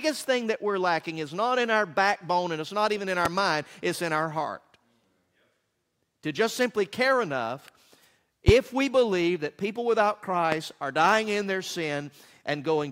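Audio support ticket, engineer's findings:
Loud pop, three single events: 3.25–3.28 s, 8.48–8.51 s, 10.52–10.55 s. Each is a sharp thump roughly 20 dB above the programme, which continues underneath. Likely cause: voltage step from a connector, switch, static discharge or driver glitch, shaped by downstream circuitry. Waveform shows a tall isolated spike. Spectrogram shows a thin full-height vertical stripe at each time.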